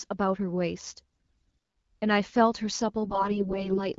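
Hoarse, scratchy, gargly roughness hits the speech from 1.26 to 1.56 s and again from 3.04 to 3.88 s, with pitch and level roughly held. These are AMR bit errors: heavily corrupted unprotected bits misplace excitation pulses and skew fine pitch, gain and spectral values in the wideband stream.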